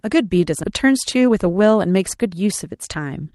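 At 0.63 to 0.65 s there's a skip ahead: about 0.7 s of speech got dropped with no fill, so it jumps straight forward to later audio. Then from 0.86 to 3.1 s a jitter buffer speed-up trims short pitch-period chunks, running about 8% fast at the same pitch and shaving roughly 0.2 s. It sounds a bit hurried through the Opus-style call path, whose top end stops around 12 kHz.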